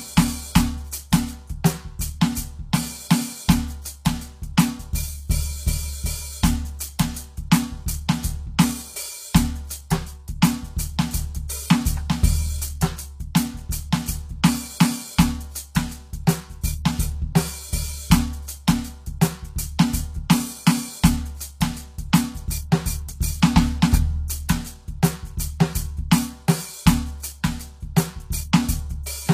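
Right from the start and all the way through, this music carries plainly audible HE-AAC compression damage. The top end isn't the real treble: everything above the core band has been rebuilt by copying lower bands upward, so the harmonics up there don't line up with the ones below, and the highs come across gritty and metallic. Nothing gets through above about 14.9 kHz. The whole thing sounds like a low-bitrate stream, likely around 24 kbps.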